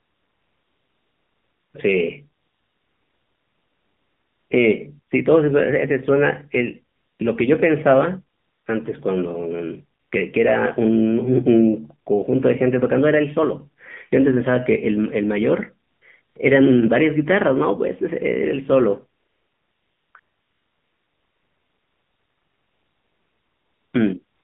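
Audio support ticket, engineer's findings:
AMR narrowband mobile codec, whole clip. Speech band-limited to roughly 150 Hz to 3.4 kHz, with a buzzy, synthetic voice quality. Spectrogram: hard ceiling near 3.4 kHz, empty above 4 kHz, thin lows. Probable component: AMR-NB encoder on the mobile leg. Mechanism: 8 kHz sampling plus a low-rate vocal-tract model driven by sparse pulses per 5 ms subframe. Damage level fits a mode around 7.4 kbps.

AMR comfort noise, ten segments between 0 and 24.43 s, lasting 120 ms to 3.74 s. Longest at 0–1.74 s, 2.42–4.50 s, 19.20–20.14 s and 20.20–23.94 s; short ones near 7.0, 8.4, 10.0, 15.9, 16.2 and 24.2 s. Symptom: real background replaced by a steady, smooth hiss that switches in and out. Spectrogram: flat, featureless noise blocks with abrupt edges. Waveform: constant-level floor. Probable component: DTX/VAD on the sending phone. Mechanism: the receiver synthesises noise from a coarse level and spectrum description.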